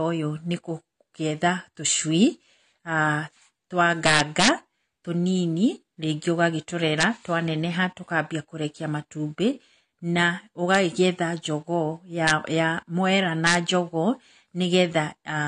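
Throughout the speech, a likely low-bitrate AAC-LC encode, consistent with around 32 kbps, has discarded everything above 10 kHz and coarsely quantised what remains. The AAC compression leaves the voice plainly dull and smeared, with a fizzy, warbling texture on sustained sounds and sibilants.

Integer overflow strikes at 4.06–4.48 s, 7.01–7.03 s, 10.75 s, 12.27–12.31 s and 13.47–13.55 s. Peaks pushed up to about 5 dB past full scale wrapped to the opposite sign instead of being limited, producing violent cracks far harsher than clipping.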